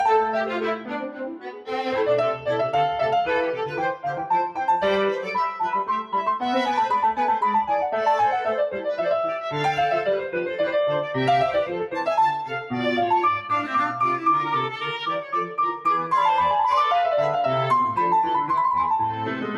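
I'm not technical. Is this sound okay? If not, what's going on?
No. A noise suppressor built for speech was left running on music or sounds, so held tones and fading tails keep dipping, making the sound pump and thin out throughout. Between 0.77 and 1.69 seconds the suppressor mistook part of the sound for noise and cut it hard, so it sinks noticeably for about a second.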